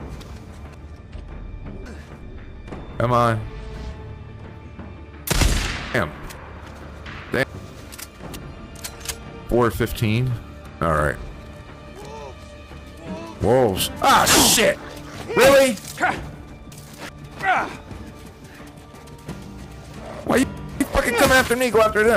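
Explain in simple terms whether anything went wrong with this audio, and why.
Chunks out of order at 0.74–2.23 s, 5.94–7.43 s, 15.98–17.09 s and 19.32–20.81 s: a 0.37-second piece plays late, jumbling that moment. Unlike a dropout, nothing goes missing.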